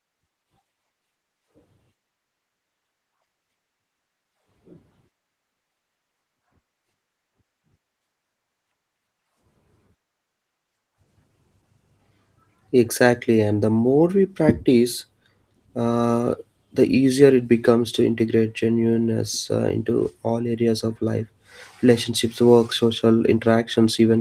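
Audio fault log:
No faults are heard in this speech clip. The Opus voice compression keeps the full band with only light coding damage, which fits a hybrid mode at around 20 kbps.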